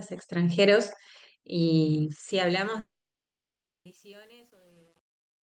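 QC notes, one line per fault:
2.29–5.43 s, truncation distortion on the fade: a 9-bit stage without dither turns the fade-out into square steps, gritty from 3.13 s, a staircase waveform with broadband spectral speckle.
2.79–3.87 s, long network dropout: audio vanishes, likely from lost packets; a brief fading buzz or hiss fills the gap, then about 0.99 s of flat silence on the waveform and an empty spectrogram.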